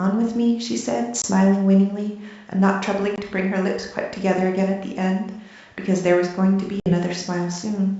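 At 1.22 to 1.25 s and again at 3.16 to 3.19 s the speech drops out for 20 ms, and at 6.80 to 6.95 s a longer hole of 60 ms opens. This is packet loss on an ADPCM call, one lost packet each time at first and about three at the end. On a waveform each gap is a flat, hard-edged stretch of silence. A spectrogram shows a clean vertical blank across the whole wideband G.722 range.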